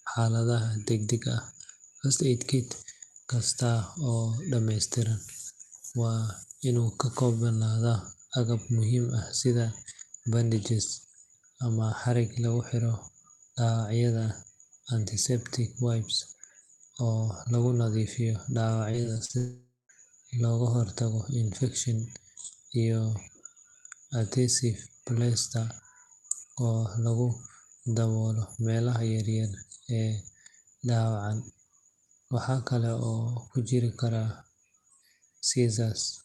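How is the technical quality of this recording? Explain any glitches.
Two glitches sit back to back in the middle of this speech recording, both typical of a call carried over an unreliable network. The audio is band-limited at 12 kHz, consistent with an Opus call path at around 32 kbps.

Repeated packet loss (robotic sound), 18.91 to 19.36 s, right after "lagu nadiifiyo": the speech turns choppy, with small pieces missing. Over this half second, six short holes open, the longest 40 ms, totalling about 140 ms of lost audio. Each hole was patched by stretching the last received sound forward, so roughly a third of the stretch is synthetic fill. That fill gives the robotic texture.

Long network dropout, 19.38 to 19.91 s, ending just before "looga hortago infekshan": the sound smears into a fading buzz, then goes silent for about 180 ms before speech resumes. About 0.52 s of audio never arrives. 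The cause is likely a network outage during which the receiver extended the last sound until that fill died away. Speech picks up again with the lost segment simply gone.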